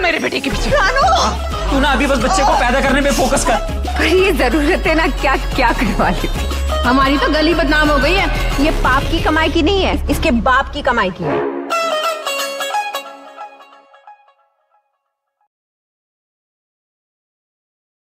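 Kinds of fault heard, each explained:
No technical faults heard.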